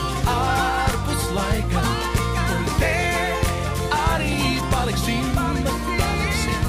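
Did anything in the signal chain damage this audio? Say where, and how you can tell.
Yes, the damage happened in the analogue wiring, before conversion. A steady mains hum at 60 Hz runs through the whole clip. It sits only about 10 dB below the wanted signal, so it is plainly audible as a constant low drone with some low harmonics above it. Because it neither fades nor shifts, it points to power-line current getting into the signal path, from a ground loop between connected equipment or from a nearby transformer.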